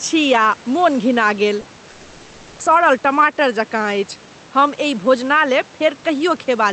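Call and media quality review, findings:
Call and media quality review, findings:

Gain pumping throughout: gain swings roughly 5 dB with loud speech. Likely an overdriven input with a fast limiter, not codec level changes.

Short concealed packet loss at 1.61 to 1.65 s and 1.75 to 1.79 s: 20 ms smears or wobbles where the jitter buffer extrapolated missing packets. These are too brief to read as a dropout.

Long network dropout from 1.89 to 2.61 s: 0.7 s of synthetic continuation, a buzz or hiss fading out with no real audio. Speech resumes later with content lost. The likely cause is a network outage rather than a local glitch.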